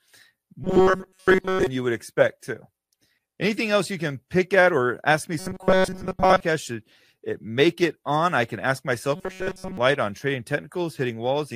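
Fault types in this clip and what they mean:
Robotic sound from repeated short buffers: three stretches of speech become a rigid metallic buzz at 188 Hz, likely from a chunk of about 5 ms replayed repeatedly while most new audio is skipped. Spectrograms show flat harmonic lines spaced 188 Hz apart; waveforms show identical repeating cycles.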